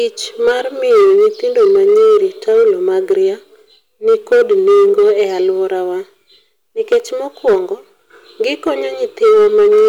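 Hard clipping recurs through the speech, with the level driven past what the stage can pass: briefly at 0.47–0.52 s (about 4 dB over), heavily at 0.90–3.13 s (about 9 dB) and 4.08–5.49 s (about 7 dB), then at 6.92–6.97 s, 7.47–7.55 s, 8.47–8.69 s, and 9.23 s to the end (about 3 to 8 dB). The peaks are sheared off, so the short bursts crackle and the long stretches turn to harsh fuzz. On the waveform the tops sit flat against a ceiling. A spectrogram shows smeared energy reaching high above the speech band during each event.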